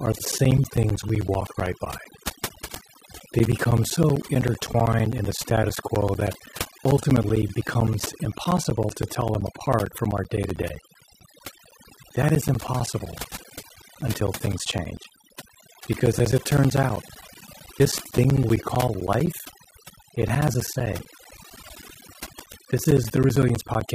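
Overdone noise removal runs through the whole recording. The reducer was set so aggressively that it pushed individual frequency bands down near its noise estimate, taking quieter parts of the speech with them. The background drops and breaks up into twinkling specks, unlike broadband hiss or a simple low-pass dulling.

Periodic USB or driver dropouts run from 0.06 s to 23.88 s, recurring every 64 ms, roughly 400 times. Each time, around 10 ms of audio vanishes into silence, producing a steady train of ticks that appear only while speech is present. That strict regular spacing separates them from random codec glitches or packet loss.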